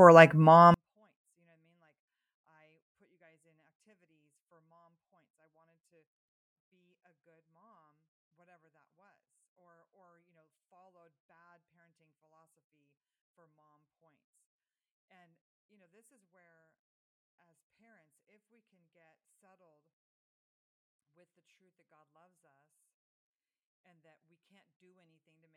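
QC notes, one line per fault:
0.74 s to the end (25.56 s), 24-bit alignment error (too quiet): from 0.74 s the speech falls about 48 dB in one step and stays nearly inaudible to the end. Samples held as 24-bit values in the low bytes of each 32-bit word are being read as full 32-bit integers, so every sample is scaled down by 256. Unlike a fade or gain ride, the drop is instant and fixed. Unlike bit crushing or clipping, the quiet speech stays clean and undistorted.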